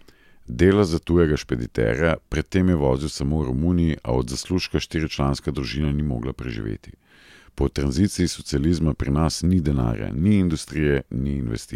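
No technical faults can be heard anywhere in the speech.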